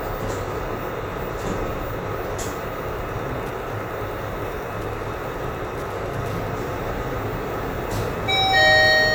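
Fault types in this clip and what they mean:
Wi-Fi interference: rectified radio bursts ticking every 102.4 ms, about ten per second, from 2.79 to 6.52 s; the rigid beacon rhythm distinguishes it from random crackle.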